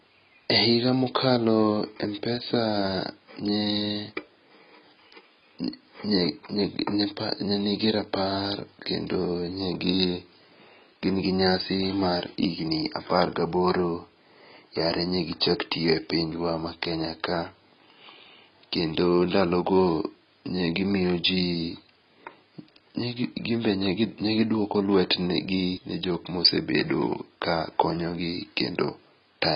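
Throughout, heavy AAC compression, likely AAC-LC at a low bitrate around 16 kbps, removes everything above 5.1 kHz, leaving the speech dull and smeared.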